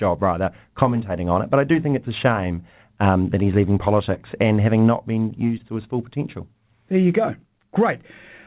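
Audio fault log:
4.14 to 4.18 s and 5.58 to 5.61 s, short concealed packet loss. Each time, about 20 ms of the call audio arrived too late to be decoded. The receiver patched each hole by extending the sound just before it, then faded back into the real signal. The speech cuts off above 4 kHz, which fits a narrowband call codec such as G.711. Each one is heard as a brief smear or wobble in the speech.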